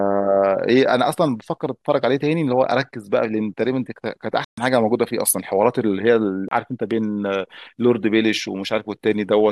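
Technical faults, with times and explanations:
4.44 to 4.58 s and 6.48 to 6.51 s, Bluetooth dropout: the speech cuts to silence for about 130 ms, then about 29 ms. Each gap starts and ends abruptly or with a fade of a few milliseconds. Speech returns further along, as if it played on unheard. Late wireless packets were likely discarded, fitting roughly nine, then two.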